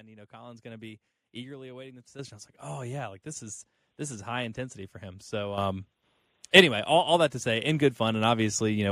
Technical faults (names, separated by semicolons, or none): microphone volume stepped up